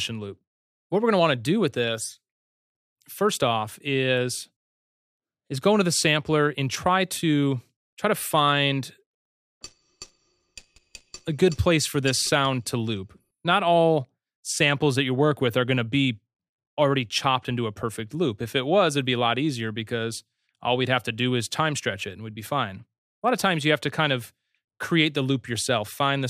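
There are no technical faults to describe in time order anywhere in this audio.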